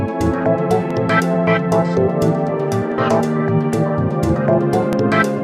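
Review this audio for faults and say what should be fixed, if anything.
Overlapping chunks cause a brief stutter at 0.91, 2.92 and 4.93 s, a regular 2.0 s spacing. Each chunk begins 12 ms before the previous one ended, so that sliver plays twice. Unlike a dropout, no sound goes missing. The click comes from repetition. Fix the chunk boundaries so each block starts exactly where the last one stopped, or crossfade and trim the overlap.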